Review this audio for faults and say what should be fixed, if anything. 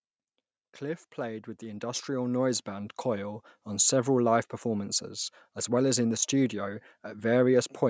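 From 0.78 s to 3.94 s there is automatic gain rising. The level climbs by about 11 dB over roughly three seconds. The voice and the background noise swell together, so the room grows louder along with the talker. The gain control judged the input too quiet and kept raising it. The rise ends just before "live performances as well". The call microphone processing, with nothing above 8 kHz, is expected for a call. Set the input level properly beforehand, or disable or slow the automatic gain control so it cannot ramp during speech.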